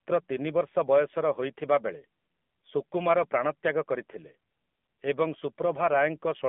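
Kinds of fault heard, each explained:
AMR narrowband mobile codec: the speech passed through the 2G/3G phone codec, rebuilt from a vocal-tract model at a low setting that fits 7.4 kbps. Nothing above 3.4 kHz remains, the band spans 200 Hz to 3.4 kHz, and the voice sounds plainly buzzy and synthetic.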